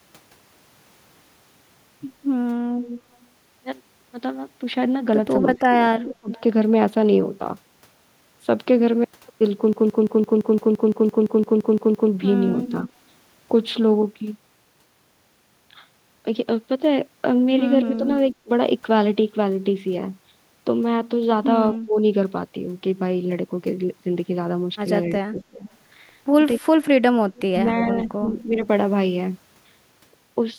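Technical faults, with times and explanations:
2.83–3.15 s, 6.32–6.41 s and 25.39–28.67 s, echo leak: a faint delayed copy of the speech trails the original by 247 ms, sitting about 15 dB below it in the first instance, about 20 dB in the second and about 25 dB in the long third stretch. The likely cause is a far-end loudspeaker whose echo canceller failed to fully remove what its microphone picked up, so a delayed replica was returned down the line.
5.56–6.30 s, 17.84–18.49 s, 21.74–21.97 s and 25.28–28.67 s, speech suppressed in double talk: the speech dips sharply, by about 30 dB at its deepest (about 20 dB at 17.84 s), and the dips add up to roughly a second in the final range. The drops coincide with both ends talking at once, likely because the echo canceller could not tell its own talker from the loudspeaker echo and attenuated both together.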